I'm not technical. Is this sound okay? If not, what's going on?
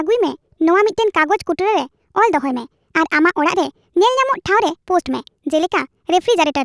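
No. This has a wrong sample rate: playback runs faster than recording, which fits 16 kHz audio played back as 22 kHz. Throughout the speech, everything runs about 1.38 times too fast and sits about five and a half semitones higher, sounding squeaky and rushed.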